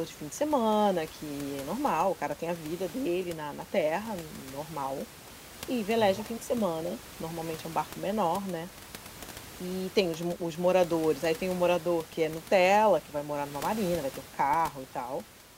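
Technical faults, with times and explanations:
No technical faults detected.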